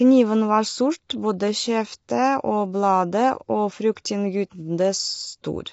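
A speech recording with plainly audible coding damage throughout: rough, grainy tone, noise between harmonics and nothing above 7.8 kHz, likely from low-delay AAC compression at around 24 kbps. At 1.09 s, pre-echo puts about 11 ms of hiss ahead of a sharp attack, because quantisation noise spread across the transform block fills the quiet gap before the onset.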